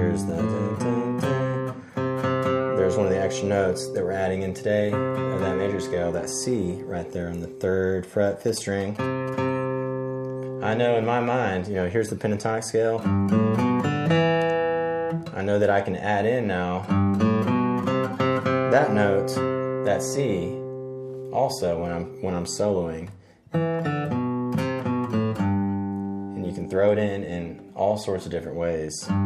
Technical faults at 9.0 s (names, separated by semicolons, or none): GSM signalling bursts